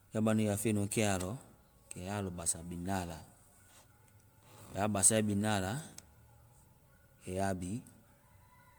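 Throughout, the speech has generation loss: swirly, hollow smearing and blurred attacks, worse than a single MP3 pass would cause, likely from about seven re-encodes, with nothing above 19.9 kHz.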